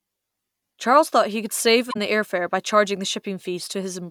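A speech clip with a corrupt frame decoded from 1.90 to 1.97 s, between "thought he could save" and "the air fare by": damaged bits in a couple of compressed frames produce a brief chirp or burst of noise peaking near -15 dBFS, visible as a misplaced smear of spectral energy and a short waveform spike.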